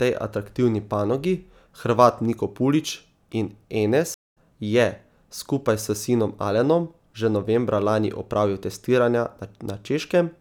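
At 4.14 s the speech drops out for about 0.2 s, a stream reconnect: the connection broke, the player restarted its decoder mid-stream, and when sound returns at 4.35 s it has skipped ahead by roughly a fifth of a second, so a little is simply missing.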